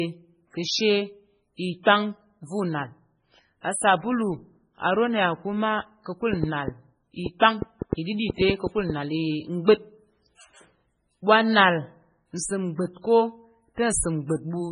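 Throughout the speech, nothing is heard above 10.5 kHz. The damage is heavy. Weak detail flickers in and out from moment to moment, giving a watery, swirly quality. Sibilants pick up metallic chirps, and attacks smear. This points to MP3 compression as the likely cause, at a very low bitrate that fits about 16 kbps. At that rate the encoder drops quiet frequency content to save bits and cuts the treble at a fixed point.

From 1.57 to 1.59 s there is pre-echo. A short hiss, spread over 24 ms, arrives just before a sharp attack. The codec spreads its quantisation noise across a whole block. The attack falls late in that block, so noise sized for the loud part leaks into the quiet moment ahead of it. The attack itself sounds softened and smeared.

From 6.33 to 8.91 s a train of clicks runs over the speech. There are about ten clicks, similar in shape, at an irregular pace of about 4.3 per second. 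They stand about 15 dB above the speech. They are heard as ticking or popping, in pauses too. Some outside source is injecting pulses. The likely cause is interference from nearby equipment, a faulty connection or a power supply problem.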